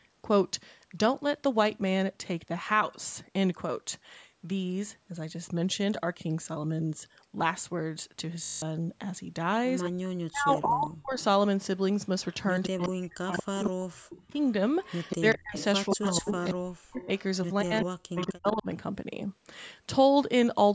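A speech recording, carrying nothing above 8 kHz as normal call microphone processing leaves it, is marred first by a system hang loop from 8.44 to 8.62 s. A single 20 ms slice of audio repeats exactly nine times, producing a steady 50 Hz buzz, and roughly a fifth of a second of real sound never arrives. The exact, mechanical repetition of one short fragment is what separates it from an ordinary dropout or a network stutter. The ring buffer kept cycling while the system behind it froze, which fits a buffer of about 20 ms.

Echo leak follows at 9.83–9.90 s, 11.20–11.24 s, 12.32–17.06 s and 17.60–18.53 s: a delayed copy of the talker, consistently 179 ms late, sitting some 10 to 25 dB under the direct sound and loudest in the long middle stretch. That fixed, discrete delay distinguishes it from room reverberation, which smears rather than repeats, and the likely cause is a loudspeaker-side echo canceller letting residue through.

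Speech suppressed in double talk overlaps these spans at 9.90–11.20 s, 12.68–14.35 s, 15.20–17.10 s and 17.63–18.67 s, with the voice dipping by up to around 40 dB in pieces. Unlike a packet dropout, the dips track the other side talking at the same moment, likely the canceller attenuating both its own talker and the loudspeaker echo when it could not separate them.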